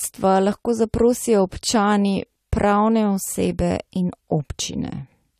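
Throughout the speech, the signal was likely passed through a lossy codec twice, sounding like an MP3 encode at around 96 kbit/s later re-encoded as AAC-LC at roughly 48 kbit/s. This is transcoding between lossy codecs: the second encoder spends its limited bits reproducing the first one's artefacts and then adds its own. Nothing survives above 14 kHz, while artefacts from both stages are heard together.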